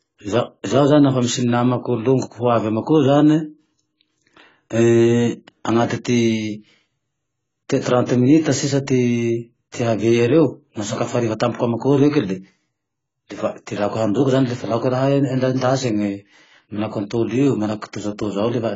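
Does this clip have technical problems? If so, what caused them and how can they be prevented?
Yes. Throughout, the speech is dull and smeared, with nothing above 7.6 kHz, likely from heavy AAC compression at a very low bitrate, around 16 kbps. Encode at a higher bitrate to prevent it.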